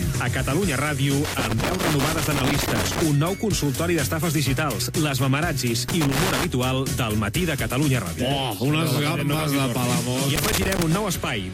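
Irregular bursts of scratching crackle break up the sound from 1.25 to 3.02 s, again from 5.89 to 6.44 s, and finally from 10.36 to 10.96 s. This is loose connector crackle. A worn or dirty contact in the signal path is shifting, so it rapidly makes and loses connection. Each break chops the audio into ragged fragments, and those repeated tiny interruptions are what reach the ear as the gritty, uneven crackle in these three stretches.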